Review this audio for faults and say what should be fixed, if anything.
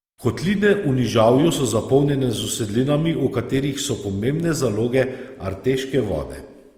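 Starved lossy coding runs through the whole clip, likely Opus compression in its music (CELT) mode at a rate fitting about 24 kbps. Short of bits, the encoder fills bands with folded or noise content, so the speech sounds rough, grainy and noisy while keeping full bandwidth. Encoding at a higher bitrate, or working from the uncompressed source, would prevent it.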